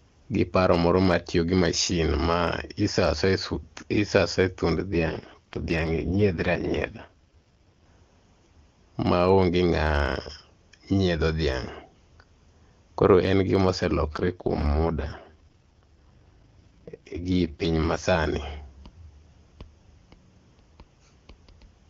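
From 4.89 to 7.85 s and again from 14.08 to 18.04 s, the speech turns rough and synthetic, which points to an AMR rate drop from 23.85 to about 6.6 kbit/s. Unlike a bandwidth fallback, the band stays wide, and unlike packet loss, nothing cuts out.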